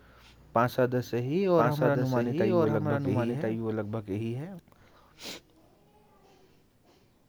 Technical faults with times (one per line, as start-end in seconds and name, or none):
1.57-4.59 doubled audio track